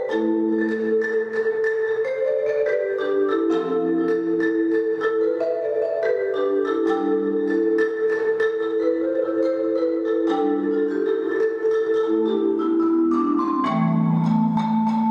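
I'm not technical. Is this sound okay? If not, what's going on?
Yes, nothing wrong can be heard in this sound, so there's nothing to fix.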